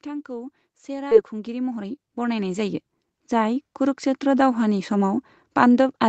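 From 0.05 s to about 4.98 s the speech and the background noise swell together, climbing steadily by about 18 dB, so the end of the clip sits far louder than the start. This is automatic gain rising: the call's gain control judged the input too quiet and kept turning its gain up over several seconds, lifting everything in the signal at once rather than the speech alone.

Between 1.11 and 1.13 s the speech lurches forward with no gap at all, the two sides spliced almost directly so the sound just before and just after do not follow naturally. This is a skip ahead: roughly 0.7 s of audio was discarded while later audio was already queued, most likely by the jitter buffer clearing out a backlog, and playback simply resumed further on.

From 1.23 to 3.11 s the speech sounds hurried, running at about 115% speed while its pitch stays unchanged, and the rhythm feels pressed. This is jitter buffer speed-up: the buffer was holding more audio than it aims for, so the receiver repeatedly cut out short pieces a pitch period or so long, shedding about a third of a second in total to bring the delay down. 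Through this stretch the Opus call path's usual limit of nothing above 8 kHz stays in place.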